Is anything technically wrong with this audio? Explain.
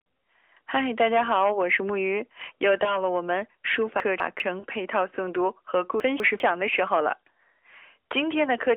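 Yes. Lost AMR speech frames occur at 2.84 to 2.98 s and 4.60 to 4.66 s. These fit one and then two missing 20 ms frames. The decoder reuses the last good pitch and vocal tract settings with falling gain, so each gap is heard as a brief dip or warble.

Chunks out of order occur at 4.0 to 4.4 s and 6.0 to 6.4 s. A 200 ms chunk plays one position late, which briefly jumbles the sound and leaves hard joins.

Throughout, the band runs from 300 Hz to 3.5 kHz with light coding texture, which fits the AMR narrowband mobile codec at 12.2 kbps.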